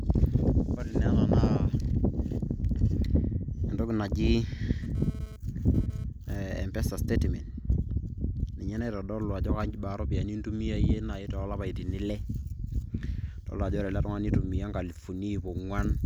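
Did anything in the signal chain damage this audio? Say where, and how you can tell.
Yes. The analogue wiring picked up GSM phone buzz from 4.83 to 6.04 s. A hard, raspy 217 Hz buzz with many harmonics sits about 23 dB below the speech. A nearby 2G phone sent data in bursts, which the circuit rectified.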